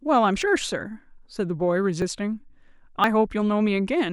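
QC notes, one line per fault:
0.42 s: dropped buffer (overrun). An abrupt skip forward, no gap, likely from roughly 70 ms of samples overwritten before being read.
2.02 s: dropped buffer (overrun). A jump in the sound, likely a short loss of around 20 ms spliced straight across.
3.04 s: dropped buffer (overrun). The speech lurches ahead, likely caused by about 40 ms of audio lost and the two sides joined directly.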